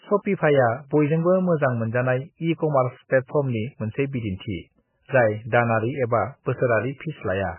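Speech, with heavy damage throughout. Nothing comes through above 3 kHz, so the treble is simply gone and s sounds lose their hiss. The sound is watery and swirly. Quieter detail flickers in and out as the encoder drops weak frequency lines from one frame to the next. Metallic chirps sit on sibilants, and attacks are smeared. This is likely MP3 compression at a very starved bitrate, which fits a rate of around 9 kbps.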